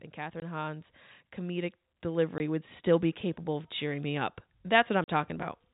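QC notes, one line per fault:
0.15–0.94 s, 1.46–2.74 s and 3.45–5.4 s, automatic gain rising: three slow swells where the level creeps up, by about 4 dB in the first two and about 7 dB in the last. The gain control decided the input was too quiet and turned itself up gradually, so the voice and the background noise rise together over most of a second or more rather than jumping.
0.40–0.42 s, 2.38–2.40 s and 5.04–5.08 s, packet loss filled with silence: three short dropouts, 20 ms, 20 ms and then 40 ms near the end. The receiver lost audio in transit and played dead silence in its place, so each hole has hard edges. The lengths fit 20 ms packets, with the last gap being two in a row. The G.711 telephone band under all this is intact.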